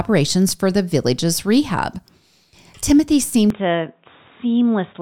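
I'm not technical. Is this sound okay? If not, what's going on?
No. From about 3.50 s to the end, the speech turns muffled, slightly quieter and faintly hissy, likely an input switched to a poorer device, such as a headset mic.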